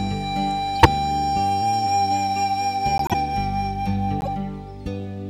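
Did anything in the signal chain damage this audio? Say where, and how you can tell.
Yes. Three brief bursts of misplaced energy, heard as chirps, blips or noise, occur at 0.75–0.87 s, 2.98–3.15 s and 4.21–4.28 s. This is a corrupt frame decoded at the codec stage. Flipped bits were decoded anyway, spraying energy into wrong frequencies for a few frames each.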